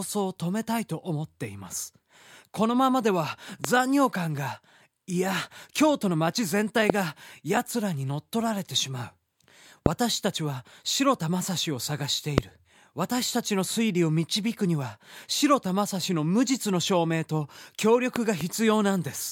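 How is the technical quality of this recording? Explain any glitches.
The technical quality is marred by a recurring loud pop. A sudden voltage step, likely from a connector, switch or static discharge, enters the signal path at 3.65–3.67 s, 6.90–6.92 s, 9.86–9.88 s and 12.38–12.40 s, and twice in succession across 18.16–18.43 s. Each lands as a sharp thump roughly 20 to 25 dB above the speech, which continues underneath.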